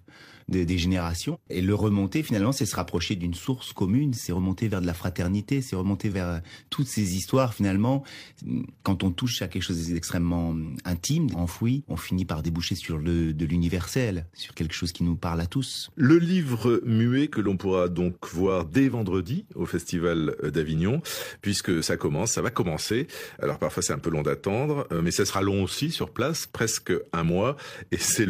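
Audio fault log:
1.30–1.37 s and 11.29–11.35 s, damaged data in a compressed stream: two brief glitches of roughly 60 ms each in the speech, the second falling between "quelque chose d'extrêmement intime" and "enfoui on finit par". Corrupted bytes made the decoder misread those frames and lose sync until it found a valid header. On a spectrogram each shows as a short, sharp-edged break in the pattern of the speech; the waveform shows an abrupt, out-of-place discontinuity.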